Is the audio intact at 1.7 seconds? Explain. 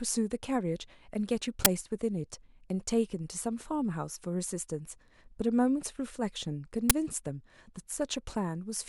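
No. At about 1.65 s there is an uninitialised buffer: one block, roughly 12 ms and consistent with a 512-sample buffer, played out before the speech was written into it. Stale memory became samples, heard as a brief, loud digital noise burst. On a waveform it appears as a sharp spike, and on a spectrogram as a broadband vertical stripe.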